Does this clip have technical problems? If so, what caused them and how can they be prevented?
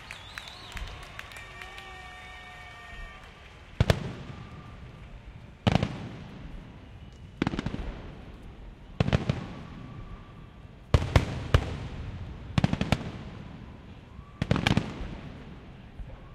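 No, there are no technical problems in this recording.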